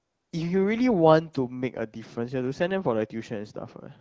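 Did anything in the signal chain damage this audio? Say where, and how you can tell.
Yes, at the very start, in the call processing stage. From 0.0 to 0.31 s the opening is filled with AMR comfort noise. The real background is missing. It is replaced by a smooth, steady hiss that then switches off abruptly. That points to discontinuous transmission. The phone judged the line silent and sent no speech frames. The receiver synthesised noise from a rough level and spectrum estimate. The speech is wideband AMR, with light coding texture that fits 12.65 kbit/s.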